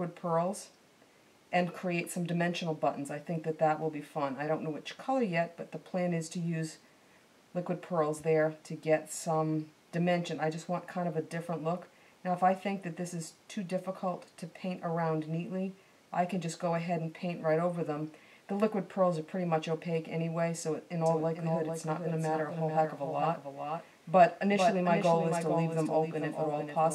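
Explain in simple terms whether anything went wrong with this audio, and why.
From 21.06 seconds until the end, everything is heard twice: a second, slightly quieter copy trails the original by nearly half a second, like a flat, instant echo with no fading tail. It appears abruptly rather than building up. This is a doubled audio track. The likely cause is the same sound being picked up a second time through a slower route, or an edit leaving two copies stacked slightly out of step.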